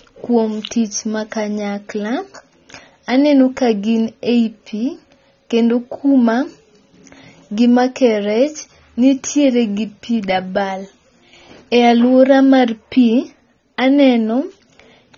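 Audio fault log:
Throughout, AAC compression: dull, smeared speech with nothing above 6.9 kHz and fizzy sibilants, likely from AAC-LC coding near 24 kbps.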